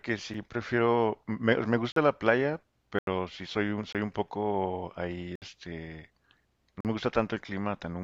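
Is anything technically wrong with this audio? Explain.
Yes. The speech has blocks of digital silence at 0.34 s (5 ms), 1.92 s (43 ms), 2.99 s (85 ms), 3.93 s (21 ms), 5.36 s (64 ms) and 6.81 s (43 ms). The output buffer was likely not filled in time, so samples dropped to zero with no fade. Four of the gap lengths match buffers of 1024, 2048 and 4096 samples. Each gap is heard as a tick or short hole. On the waveform it shows as a flat line, and on the spectrogram as a blank vertical strip.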